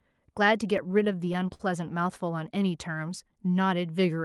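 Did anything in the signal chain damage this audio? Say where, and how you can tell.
Yes. Repeated stalls (stutter) hit the network and jitter-buffer stage between 0.77 and 1.92 s. Thirteen brief holds drag the speech, the longest about 52 ms. Late packets kept draining the buffer, so the receiver stretched the last sound. Nothing is lost.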